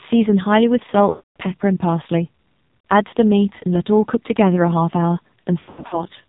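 The whole clip runs through the AMR narrowband mobile codec, squeezed hard. Nothing gets through above 4 kHz, and the speech comes out buzzy and synthetic, which fits one of the low AMR-NB modes around 5.9 kbps.

On top of that there are lost AMR speech frames in three spots. From 1.10 to 1.30 s a solid run goes missing. The decoder keeps repeating its last pitch and tract settings while the gain falls, so the sound smears and fades out. From 2.68 to 2.84 s the losses are scattered, with the longest run around 60 ms, so you get short warbly dips. From 5.60 to 6.04 s there's another patchy stretch with runs up to about 80 ms. Each time the voice comes back thin and rough for a moment.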